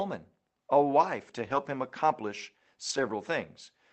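At 1.45 to 1.55 s, between "a wife to" and "him accomplish", and again at 2.89 to 2.99 s after "him accomplish", a lost packet rebuilt from error correction replaces about 60 ms with a rougher, noisier low-bitrate copy. There is no gap, and the 8 kHz Opus call bandwidth is kept.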